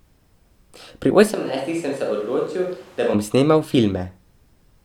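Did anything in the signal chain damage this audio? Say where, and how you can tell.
Yes. At 1.09 to 1.11 s, compressed frames are skipped in the codec or storage stage. About 20 ms of audio is missing. The speech jumps forward.

From 1.35 s to 3.13 s, the speech turns roomy and hollow. Bass thins and the level falls by about 10 dB. Room noise rises to about 25 dB below the speech. The change comes abruptly just before "bom snemal". This is likely a switch to a distant microphone at capture.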